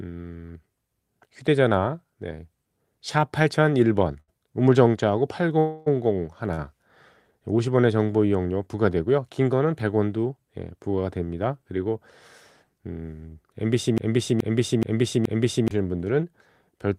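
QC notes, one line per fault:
4.20 s and 6.54 s, short stall from a late packet: a packet arrived late at each point, so the receiver held the last sound until it came, for 78 ms at 4.20 s and 37 ms at 6.54 s, then resumed from the same place. Nothing is lost, but playback runs later after each stall. On a spectrogram the harmonics flatten into a short stretch of unchanging horizontal lines; the waveform shows a brief run of repeated, uniform cycles.
5.59 to 5.88 s, call audio freeze: the sound stops moving forward for 275 ms, and the last sound continues as a fading buzz or hiss with no true silence. It then picks up where it left off, so a gap has been inserted and nothing is missing. The likely cause is packets held up in transit draining the jitter buffer. A spectrogram shows a frozen smear decaying across the span; the waveform shows a tapering, featureless stretch.
13.98 to 15.71 s, broken-record loop: a 425 ms fragment plays four times back to back, and the audio that should have filled those 1.7 s is lost. 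The likely cause is a stalled player, encoder or stream resending the last piece it held. On a spectrogram, identical blocks repeat at 0.43 s intervals. The waveform shows the same envelope copied exactly, with hard joins between copies.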